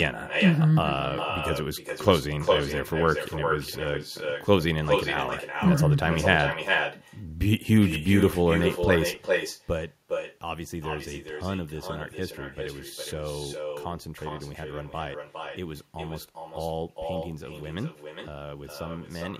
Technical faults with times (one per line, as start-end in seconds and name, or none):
0.00-19.40 echo with no canceller